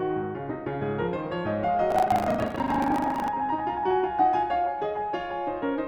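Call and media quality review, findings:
Buffer tearing, 1.88–3.31 s: 25 Hz robotic rattle over the music. Writer/reader pointers crossing each 40 ms period, so part of every buffer, around 40%, replays audio roughly 100 ms stale, with hard splices either side. Suspect playback ring buffer.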